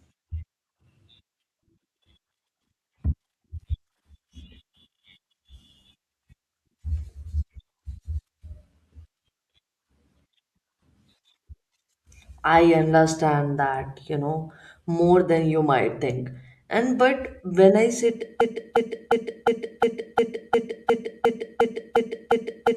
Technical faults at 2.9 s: none

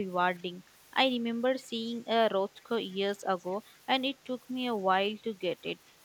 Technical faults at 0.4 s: echo leak

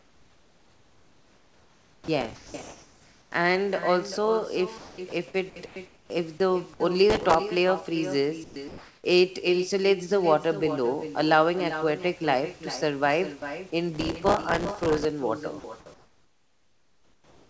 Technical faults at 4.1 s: echo with no canceller

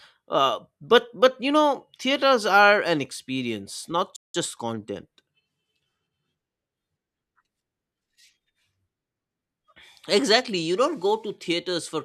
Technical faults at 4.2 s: playback stall

